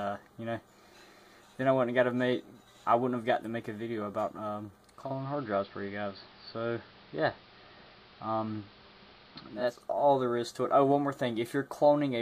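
Digital radio blending to analogue runs from 4.84 to 9.94 s. The receiver lost its digital stream and cross-faded over about 0.46 s to the station's AM broadcast, so hiss rises to roughly 30 dB below the signal, and the level shifts by about 1 dB.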